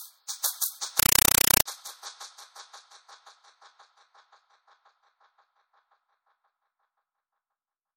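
From 0.99 s to 1.66 s the sound gives way to loud, chattering static: a compressed stream played as audio. An AC-3 bitstream, which fits a 256 kbps encode, reached the output undecoded and was reproduced as raw samples. Each frame arrives as a dense 5.33 ms burst followed by zero padding, repeating 31.25 times a second, hence the buzzing rattle. On a waveform this shows as loud slabs separated by flat silence. A spectrogram shows evenly spaced vertical bands of broadband noise across the whole frequency range.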